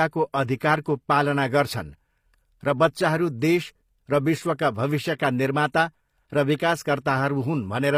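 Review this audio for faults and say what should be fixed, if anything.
Throughout the speech the treble sounds synthetic rather than recorded, with s sounds turning gritty and lispy and nothing above 15.5 kHz. This is likely HE-AAC compression at a low bitrate around 24 kbps, where the upper band is rebuilt by copying lower harmonics upward. Encode at a higher bitrate with a full-band codec such as AAC-LC to prevent this.

From 6.56 to 6.60 s a short hiss of about 41 ms runs ahead of a sharp attack, which sounds softened and smeared. This pre-echo occurs because the transform block spreads quantisation noise sized for the loud onset back into the quiet moment before it. Raising the bitrate or enabling shorter transform blocks on transients would prevent it.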